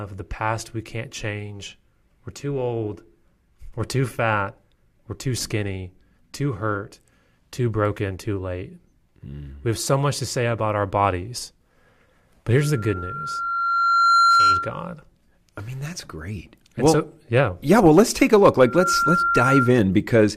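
Loudspeaker feedback squeal at 12.57–14.88 s and again at 18.61–19.80 s: the microphone re-amplifies its own loudspeaker, and at about 1.4 kHz the loop gain exceeds one. A steady tone swells over the speech, slowly the first time and almost instantly the second, peaking about 5 dB above it.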